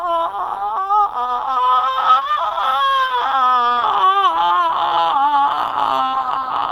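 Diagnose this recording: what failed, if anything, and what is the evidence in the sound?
Codec stage: grainy, hoarse music throughout, without MP3-style swirl, top end reaching about 20 kHz; likely Opus compression in hybrid mode, fitting roughly 16 kbps.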